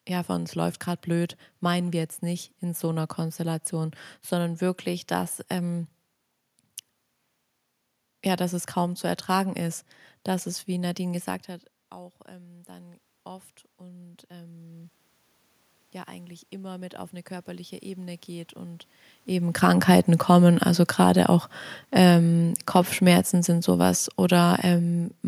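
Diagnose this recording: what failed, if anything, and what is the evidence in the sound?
Voice and room noise swell together at 11.91–14.99 s, after "gesagt hat", and 16.08–20.14 s: automatic gain rising in call processing, about 6 dB each time.

After "kommen also gerade auch", 21.99–25.09 s, voice and background sink together by about 4 dB: automatic gain falling, the call processor easing its gain back.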